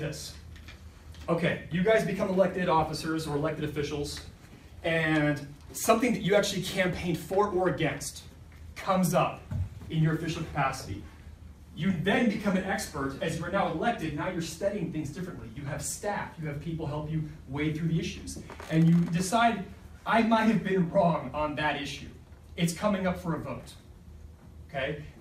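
DAB burbling occurs at 0.71 to 0.75 s and again, longer, from 10.44 to 10.75 s. Bit errors slip past error correction into the MP2 data, corrupting samples. Wrong samples put short blips of noise in single sub-bands.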